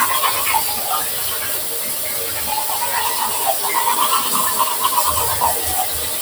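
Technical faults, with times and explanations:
Throughout, noise suppressor applied to sounds: a speech-tuned suppressor reads sustained parts and tails as noise, dipping them roughly 5 dB while onsets pass, so things pump and thin.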